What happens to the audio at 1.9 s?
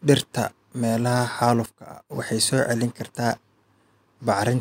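At 1.9 s the speech sits inside a sudden gain jump that runs from 1.66 to 2.10 s: the level drops by about 14 dB in a single step and snaps back just before "waxay soo celin". The likely cause is a gain change applied from one sample to the next with no ramp. The speech and background noise fall together, so on a waveform the envelope is abruptly squared off, and a spectrogram shows a uniformly darker block with vertical edges.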